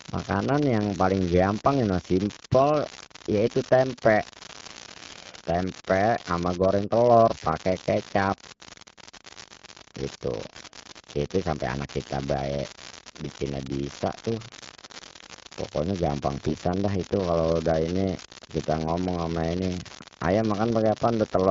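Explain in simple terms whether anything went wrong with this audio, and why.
Yes, two things went wrong. A steady crackle runs through the whole recording, even in the pauses between speech. This is an unreliable data bit: one digital line is faulty, so random samples get the same jolt. Because it never stops, it is not tied to the speech.

The second fault is AMR bit errors, heard as brief hoarse, gargly patches in the voice at 2.42 to 2.47 s, 7.36 to 7.46 s, 13.24 to 13.30 s just after "kita bae", 16.35 to 16.54 s just before "dah itu kalau dah", and 18.16 to 18.24 s just after "itu kalau dah ini". A weak phone connection flipped some of the less protected bits in the compressed speech. The voice keeps roughly its pitch and loudness but sounds scratchy for a moment. Unlike the constant crackle, these are short bursts inside the speech.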